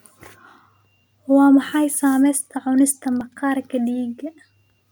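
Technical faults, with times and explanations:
0.75–4.44 s, clock drift buffer slips: A short click recurs about every 1.23 s under the speech, roughly four times across this span. Each click is a discontinuity where a small block of samples, on the order of fifty, is dropped or repeated. This is likely caused by two devices running on independent clocks that disagree by something like 700 ppm, so the buffer between them slowly fills or drains until it must skip or repeat a block.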